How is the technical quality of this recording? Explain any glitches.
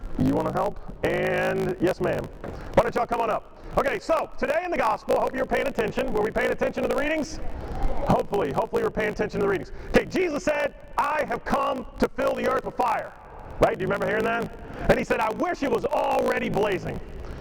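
The recording has one fault that runs through it from start to finish.

Block size mismatch (truncated), for the whole clip: the sound fits blocks of 1024 samples being written while a shorter length is read, so each block's tail is lost. This gives a 54.4 Hz buzz and makes playback 1.16 times faster. A spectrogram shows evenly spaced vertical seams, and the waveform has regular small jumps.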